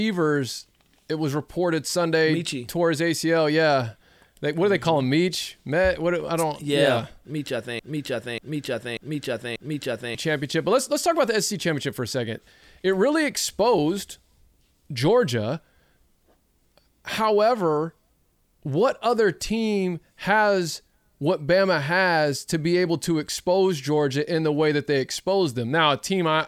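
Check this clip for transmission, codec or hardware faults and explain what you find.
One fault stands out in the speech. From 7.79 to 10.15 s there is a broken-record loop: a 0.59 s fragment plays four times back to back, exactly identical each pass, and the speech meant for that stretch never arrives. The likely cause is a stalled player, encoder or stream resending the last fragment it held. On a waveform the same envelope shape tiles across those 2.4 s, and a spectrogram shows a block of identical patterns with hard seams every 0.59 s.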